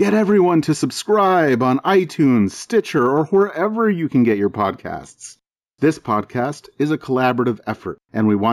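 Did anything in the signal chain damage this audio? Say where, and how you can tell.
Yes, at the sample-rate conversion stage. Throughout the speech there is imaging from linear upsampling. The top of the band is dulled, and a faint mirrored copy of the spectrum sits between 8 kHz and 16 kHz, roughly 30 dB below the signal. It adds a light metallic shimmer on sibilants. This fits a 16 kHz source raised to 48 kHz by straight-line interpolation, which filters too weakly to remove those images. Aliasing would fold content down into the band. Here the copies sit above it, mirroring the original.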